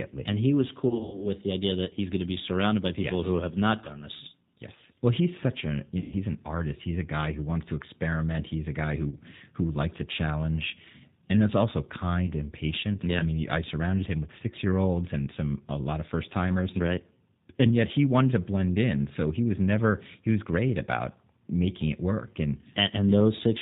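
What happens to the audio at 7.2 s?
At 7.2 s the speech sounds rough, synthetic and dull above 4 kHz, as throughout the clip: G.729 codec damage, rebuilding speech from a vocal tract filter and sparse pulses, consistent with an 8 kbit/s stream.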